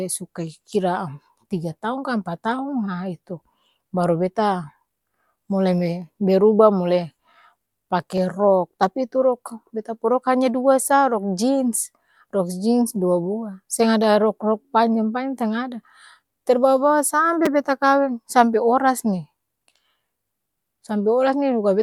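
A brief click at 8.18 s and a short buzz at 17.46 s in the speech are a repeated buffer. A 5 ms slice played twice, then four times, with hard joins, because fresh audio arrived late. Almost nothing appears lost.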